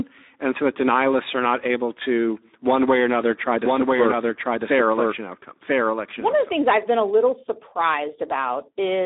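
From start to finish the speech carries Speex codec damage, and it's plainly audible. The low end thins out below about 250 Hz and everything stops around 3.7 to 3.8 kHz, so it has that boxed-in phone-line sound. Inside that band the CELP coder is short of bits for the excitation, so the speech comes out hoarse and noisy, which fits a low setting of around 11 kbps.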